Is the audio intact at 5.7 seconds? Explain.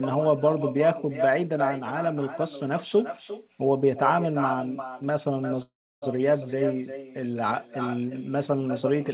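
No. The audio there falls inside a call audio freeze running from 5.62 to 6.04 s. Packets were likely held up in transit, so the jitter buffer ran dry and the receiver had to invent sound to fill the wait. It carries the last sound on as a short fading buzz and then falls silent for about 320 ms. When the packets arrive, the speech picks up where it stopped. Nothing is lost, but a gap of about 0.4 s has been inserted, and everything afterwards is that much later.

Separately, the far end's loudspeaker is feeding back into its microphone with no echo canceller to remove it. Around 5.7 s, as throughout the clip, the speech is shadowed by a copy about 8 dB quieter arriving roughly four tenths of a second later. That copy sounds thinner than the original because it has passed through the far room and the network round trip.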